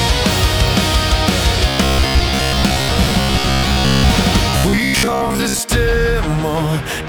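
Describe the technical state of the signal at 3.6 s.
At 3.6 s the signal is inside a stretch of robotic sound from repeated short buffers, running from 1.69 s to 4.11 s. Fresh audio is arriving too slowly, so the playback likely keeps looping a fragment of roughly 15 ms while real material is skipped. Most of the sound is made of these repeats, and that fixed loop rate stamps a rigid, metallic buzz at 66.8 Hz onto the audio, which still loosely tracks the underlying content.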